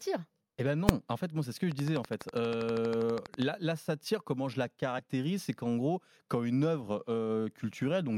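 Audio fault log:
0.89 s, invalid numbers at full scale: output slammed to maximum for about 1.5 ms, fitting a 64-sample block, so it is one sharp bang, not a dropout.
1.72–3.43 s, train of clicks: about twenty similar clicks at a steady 12.3 per second, some 10 dB above the sound, likely interference, not isolated pops.
4.98 s, compressed frames skipped: roughly one 26.1 ms frame skipped, so the sound jumps ahead about 30 ms.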